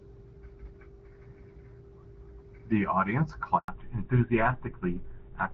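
At 3.58 s the speech cuts out in a handover gap. The call switched networks, and no frames arrived for 100 ms, until 3.68 s. From 3.68 s to the end comes a fallback to narrowband. The clear HD Voice sound, consistent with AMR-WB at about 12.65 kbit/s, gives way to an older codec, likely GSM full rate. Nothing remains above 4 kHz, so the speech turns dull and rough.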